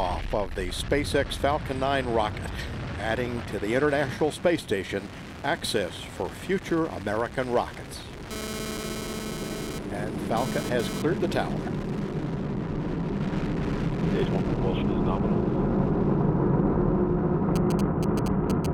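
GSM phone buzz runs from 8.31 to 11.02 s. A 2G handset close to the recording chain was transferring data, keying its transmitter in bursts about 217 times a second. Some stage in the audio circuitry acted as a detector, rectifying those radio pulses into the signal path. The result is a hard, raspy 217 Hz buzz dense with harmonics, about 8 dB below the wanted audio. It stutters in and out rather than holding steady, and has no relation to the sound underneath.

GSM signalling bursts appear from 17.56 to 18.66 s, at a level roughly 10 dB under the signal. Here the phone was not carrying traffic but sending brief clusters of bursts, the kind of control exchange a handset makes with the network. The same rectification turns each cluster into a tick or a short 217 Hz buzz, giving the galloping dit-dit-dit rhythm that marks this kind of interference.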